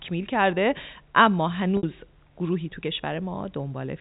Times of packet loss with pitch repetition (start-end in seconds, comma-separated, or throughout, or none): 1.77-1.83